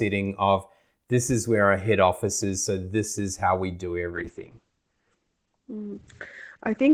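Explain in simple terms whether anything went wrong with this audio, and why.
Something does go wrong near the end. Right after "is how we do", at about 4.1 seconds, there is a call bitrate drop. The call's connection seemed to weaken, so the system told the audio encoder to use far fewer bits. With less data, the sound is coded more roughly. The top end also gets cut away above about 8 kHz. The speech turns muffled and watery, and it stays that way until the clip ends.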